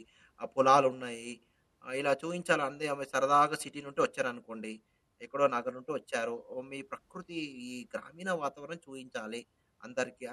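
Listening closely to the speech, nothing stood out as a technical problem at any point.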